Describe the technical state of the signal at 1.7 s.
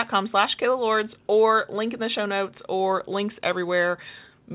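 At 1.7 s the speech is intact, with no fault, only the narrowband character of a telephone-style call codec, which leaves nothing above about 4 kHz.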